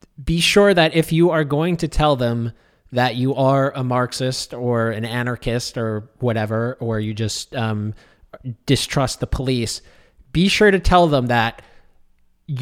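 No technical faults are audible.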